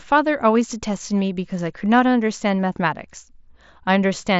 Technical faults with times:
none

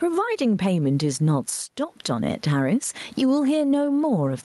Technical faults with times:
0.00-4.45 gain pumping

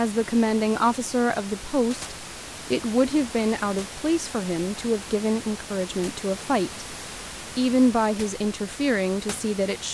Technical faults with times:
none

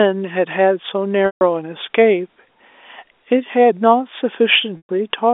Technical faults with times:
1.26-1.41 packet loss with pitch repetition
4.77-4.89 packet loss with pitch repetition

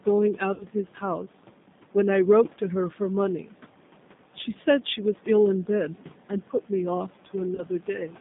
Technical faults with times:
0.00-8.20 noise suppressor artifacts
0.00-8.20 G.729 codec
0.54-0.66 VoIP packet loss concealed by the speech codec
7.55-7.63 VoIP packet loss concealed by the speech codec

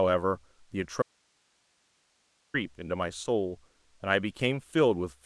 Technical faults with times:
1.02-2.54 audio dropout to a faint residue

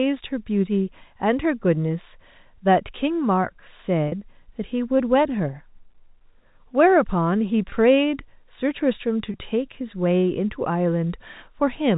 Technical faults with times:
4.08-4.12 packet loss with pitch repetition
7.70-7.72 packet loss with pitch repetition
9.32-9.34 packet loss with pitch repetition

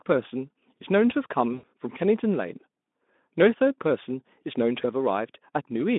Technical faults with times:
1.53-1.64 VoIP packet loss concealed by the speech codec
4.81-4.86 VoIP packet loss concealed by the speech codec

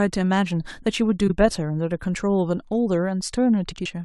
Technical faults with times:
1.27-1.33 frames out of order
3.71-3.86 frames out of order

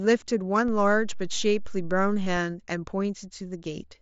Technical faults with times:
0.68-2.37 DC step
2.26 concealed Bluetooth headset packet loss

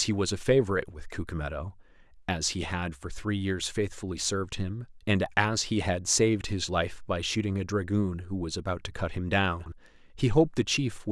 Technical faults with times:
9.60-9.72 chunks out of order

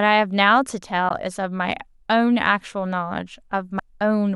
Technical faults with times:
1.09 damaged data in a compressed stream
3.79 damaged data in a compressed stream

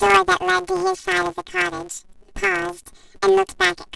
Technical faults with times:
0.00-3.95 planar audio read as interleaved

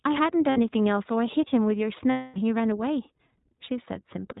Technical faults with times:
0.00-4.40 iLBC codec
0.50-0.58 lost iLBC frames
2.10-2.38 lost iLBC frames

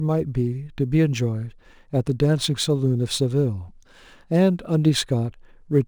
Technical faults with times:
0.00-5.87 sample clock jitter

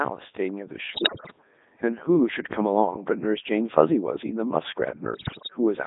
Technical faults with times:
0.00-5.87 Codec 2 vocoder
0.92-1.32 bit errors on digital voice radio
5.14-5.50 bit errors on digital voice radio

